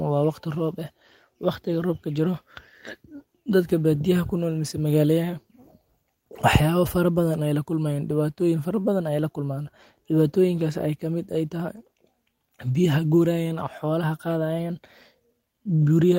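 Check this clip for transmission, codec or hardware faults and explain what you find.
I checked this clip and found no faults to explain.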